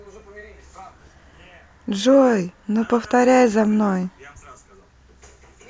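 Nothing stood out on listening to this speech recording.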